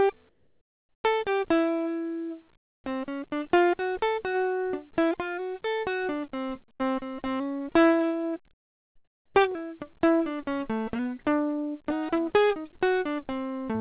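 Music, passed through a narrowband call path whose lack of anything above 4 kHz points to G.711 A-law. Most likely, discontinuous transmission paused sending in the quiet stretches and the receiver inserted comfort noise in place of the background, so the real ambience, about 39 dB below the loud passages, turns into flat, featureless hiss at 0.29–1.04 s (about 10 dB quieter), 2.57–2.84 s (about 19 dB quieter) and 8.54–9.35 s (about 15 dB quieter). At 2.82–2.84 s the returning sound arrives with an onset clipped by the voice detector, likely because it reacted late and the first 20 ms went unsent, so the sound starts abruptly without its soft attack. A burst of packet loss at 6.74–6.83 s makes the receiver stretch the last sound for 55 ms as a fading, held tone, after which playback jumps ahead past 60 ms of missing audio.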